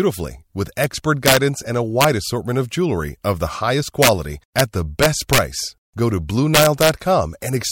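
Integer overflow cracks this speech clip at 0.84 s, 1.26–1.37 s, 2.01–2.04 s, 4.02–4.09 s, 4.59 s, 5.03–5.38 s and 6.55–6.89 s. Loud peaks, pushed about 1 to 5 dB past full scale, wrap to the opposite sign instead of being limited, giving violent snaps far harsher than clipping.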